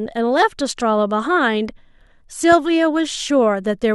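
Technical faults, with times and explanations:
2.52–2.55 s, loud pop: a single sharp pop of about 20 ms sits on top of the speech, peaking a few decibels above the surrounding level, while the speech continues underneath without a break. The likely cause is a sudden voltage step or pulse entering the signal path, such as a plug or switch contact, a static discharge or a driver glitch, which the following circuitry shapes into a brief, hard transient.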